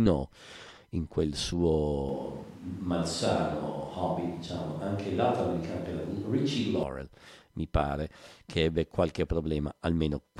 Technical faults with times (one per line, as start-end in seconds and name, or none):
2.09-6.83 switch to a distant microphone